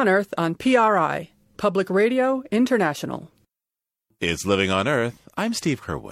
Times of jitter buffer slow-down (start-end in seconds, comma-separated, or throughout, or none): none